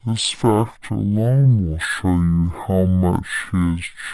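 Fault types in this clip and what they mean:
Stereo read as mono: the left and right samples of this speech were taken in turn as one channel, so everything plays at half speed and an octave low; a spectrogram shows compressed low harmonics plus a faint mirrored copy in the upper half.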